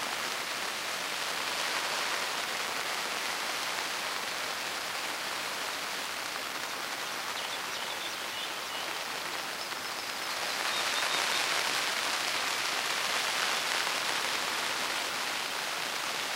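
There are no technical faults to describe in this audio.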